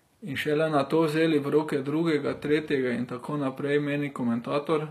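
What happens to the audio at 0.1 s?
At 0.1 s, as throughout the clip, the speech is likely coded with HE-AAC at a low bitrate, which fits about 24 kbps: the treble is rebuilt by copying lower bands upward, so s sounds turn gritty and lispy, with nothing above 14.9 kHz.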